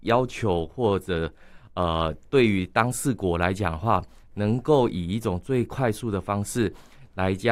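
Speech recording, no technical faults.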